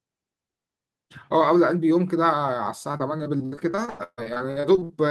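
From 2.91 s to 4.91 s the speech turns choppy and robotic as short fragments drop out and are replaced by a smeared continuation of whatever came just before. This is repeated packet loss: about twenty holes open in quick succession, the longest around 142 ms, and each is papered over by extending the previous sound. Roughly a third of those two seconds, about 0.74 s, is filled-in rather than real audio.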